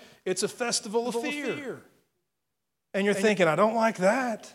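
From 1.05 s to 3.29 s the speech carries a doubled audio track: a second, full-band copy trails the original by about a fifth of a second, a few decibels quieter. It is likely a second capture through a slower path, or an edit leaving two copies out of step. Unlike an echo or reverberation, the copy has no decay or room colouring, repeats only once, and switches on and off abruptly at both edges.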